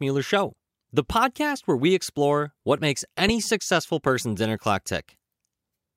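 At 3.28 to 3.32 s there's a single loud pop, a sharp thump that jumps around 10 dB above the speech, which keeps going underneath it. That's likely a sudden voltage spike, from a plug, switch or static discharge, getting into the signal chain.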